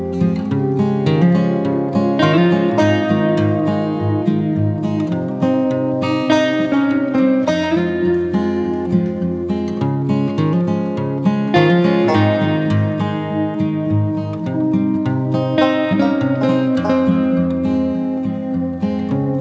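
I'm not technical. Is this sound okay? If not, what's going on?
Yes, it's fine: the audio came through an ordinary internet call connection, which trims off the very highest sounds above about 8 kHz, and nothing has gone wrong with it.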